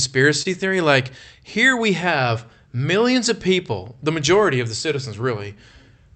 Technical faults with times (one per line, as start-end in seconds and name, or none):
0.00-6.15 clock drift between sender and receiver
0.08-5.83 repeated timing corrections
0.42-0.47 short stall from a late packet